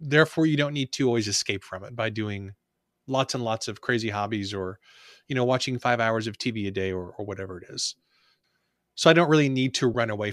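At 9.94 s, lost LE Audio frames cause a brief glitch. The decoder patches the gap with a noisy copy of the previous spectrum, which fits a single lost 10 ms frame.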